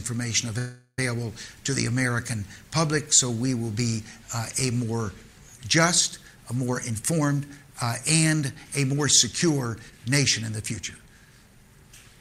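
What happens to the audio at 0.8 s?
Network packets were likely held up until the jitter buffer ran dry, causing a call audio freeze from 0.58 to 0.99 s: the last sound is stretched into a fading buzz, ending in about 80 ms of silence, before the audio resumes exactly where it stopped, with nothing lost. Underneath, the signal has likely been truncated to about 10 bits without dither (low bit depth without dither, 0.42 to 4.02 s), leaving grainy distortion roughly 40 dB below the sound that follows its level.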